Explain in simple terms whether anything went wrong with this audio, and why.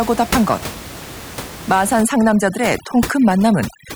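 Something did go wrong from about 2.0 s to the end: overdone noise removal. A cleanup tool was pushed too hard, so the room noise drops and breaks up into little twinkly specks, and the speech loses its quieter bits as they get scrubbed away too.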